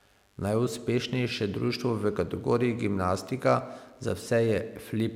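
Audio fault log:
Throughout, mains buzz: switching spikes from the 50 Hz supply, occurring twice in each mains cycle, are getting into the signal path, as happens with a dimmer, a rectifier or a missing shield. Because the spikes are sharp, they bring a long series of harmonics of 50 Hz reaching into the kilohertz range. Beneath the speech this is heard as a steady, raspy buzz, at a low level of roughly 40 dB below the signal.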